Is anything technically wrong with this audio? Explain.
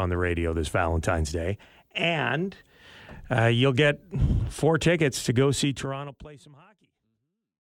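No, nothing's wrong here; the level just eases down gently from about five and a half seconds to the end, the way an editor would finish a speech clip.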